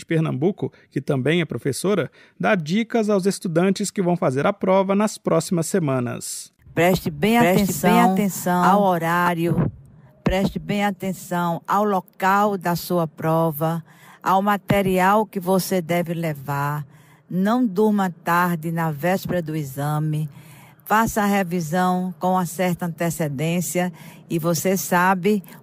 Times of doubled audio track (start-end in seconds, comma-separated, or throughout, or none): 7.40-9.28